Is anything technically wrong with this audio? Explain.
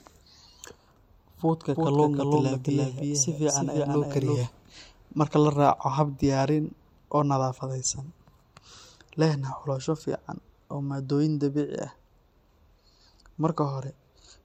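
Yes. From 1.75 to 4.39 s there is a doubled audio track: a dry, full-band copy trails about a third of a second behind, around 5 dB quieter, likely from a slower capture path. It starts and stops abruptly, and the spectrogram shows every pattern repeated, shifted right.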